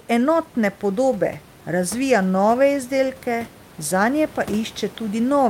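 This is a speech clip, and nothing is technically wrong with it.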